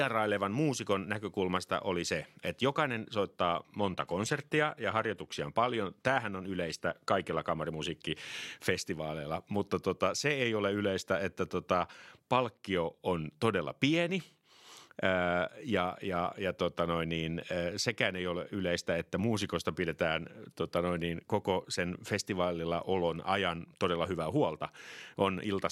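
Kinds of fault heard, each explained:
Adaptive stream at a lower bitrate: from about 3.6 to 7.6 s the speech abruptly takes on a thin, synthetic sheen, then snaps back just as suddenly, with no gap on either side. That's the player dropping to a cheaper version of the stream for four seconds while the connection struggled. The swishy, reconstructed highs fit a switch from roughly 96 kbit/s AAC down to something like 32 kbit/s HE-AAC.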